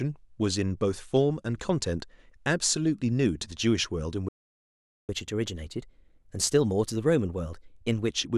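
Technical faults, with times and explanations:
4.28–5.09 s, playback stall: the speech cuts off mid-flow and the output goes silent for about 0.8 s before resuming. The likely cause is the player running out of buffered data or its output thread being blocked, so nothing reaches the output until it recovers.
5.09–8.09 s, catch-up at higher speed: after the gap the speech runs at 1.1 times normal speed for three seconds, with pitch raised by roughly one and a half semitones. The player is resampling its backlog faster to win back lost time, then returns to normal rate.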